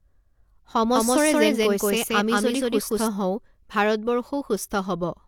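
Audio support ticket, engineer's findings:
Low-bitrate audio saved at a high bitrate, whole clip: nothing above 18.5 kHz, the first encoding's artefacts still there. Likely a low-rate encode re-wrapped at a high MP3 rate; the extra bits restore nothing.

Doubled audio track, 0.96 to 3.08 s: an equally loud, dry copy trails about a fifth of a second behind and cuts in and out abruptly. Likely a second capture path or misaligned edit.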